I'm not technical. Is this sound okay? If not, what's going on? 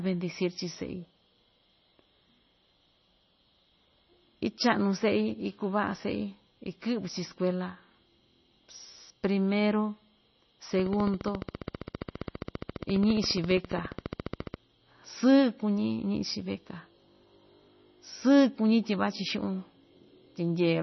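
No. The speech sounds watery and dull throughout, with nothing above 5.9 kHz, which points to heavy MP3 compression as the likely cause. From 10.79 to 14.55 s, a train of clicks ticks steadily, about 15 per second and around fifty in all, likely from interference or a faulty connection.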